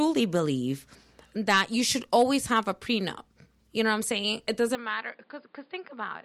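At 4.75 s the speech abruptly loses everything above 5 kHz, drops roughly 10 dB and gains a new noise floor, with no gap at the join. That points to an input switched to a poorer device, likely. A plain filter or gain change would not alter band, level and noise together.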